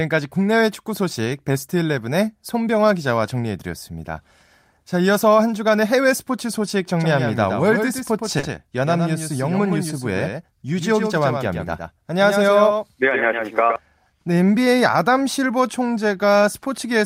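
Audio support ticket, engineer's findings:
Doubled audio track, 7.00–13.76 s. Full-band second copy roughly 100 ms behind, about 5 dB down; appears and disappears abruptly at those edges. Likely a second capture path or an edit holding two out-of-step copies. Unlike acoustic echo: single repeat, no decay tail, no room colouring.

Short concealed packet loss, 8.39–8.46 s, inside the doubled section. 40 ms never reached the decoder; the receiver extended the preceding sound to fill it, then blended back. Heard as a brief smear or wobble, not silence, which separates it from a hard dropout.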